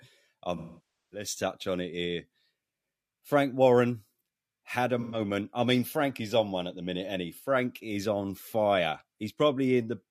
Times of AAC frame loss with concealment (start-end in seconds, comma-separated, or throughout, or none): 0.56-1.27, 5.00-5.19